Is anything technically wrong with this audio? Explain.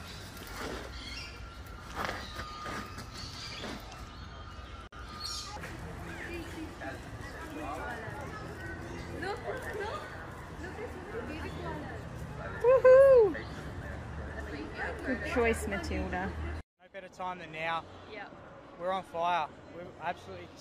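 Yes, there's one glitch. From 4.87 to 4.93 s there's a gap at a join of encoded pieces: about 51 ms of silence, softened edges, left by untrimmed encoder delay and padding, before the sound resumes where it left off.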